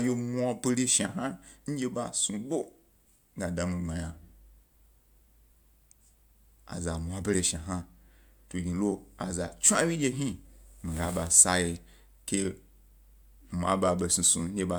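Listening closely to the speech recording, nothing technical stood out at any point.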